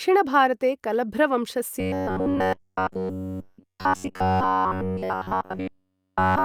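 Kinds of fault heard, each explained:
Robotic sound from repeated short buffers: from 1.80 s, just after "भारते कलभ्र", to the end at 6.44 s, the speech becomes a rigid, metallic buzz at 93.8 Hz. It is likely caused by a segment of about 10.7 ms being replayed nearly continuously while new audio is skipped.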